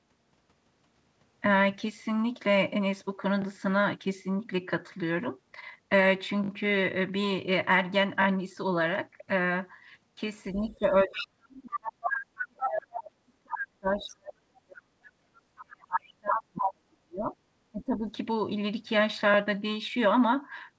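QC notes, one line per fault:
10.52–14.87 s and 15.55–18.10 s: speech suppressed in double talk. The talker's level sinks and breaks up while the far end is talking, by about 35 dB at worst in the first stretch and about 40 dB in the second. Roughly 4 s and 2 s of speech are affected. The likely cause is the echo canceller turning down both voices when it cannot separate them.
10.71–12.06 s, 12.60–12.68 s, 13.99–14.03 s and 16.65–16.72 s: other side's voice leaking through. A second voice sits under the talker. It is a sustained stretch at about 10 dB below the speech, then brief scraps at about 5 dB below, plus one faint trace around 35 dB down. This is likely loudspeaker echo that the canceller did not fully remove.
15.15–15.27 s: background gated by the echo canceller. The room sound drops by about 21 dB for roughly a tenth of a second and then returns. The canceller clamps the microphone hard while the loudspeaker plays and releases it when playback stops.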